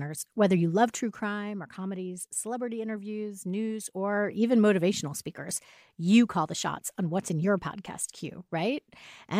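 No technical faults can be heard anywhere in this clip.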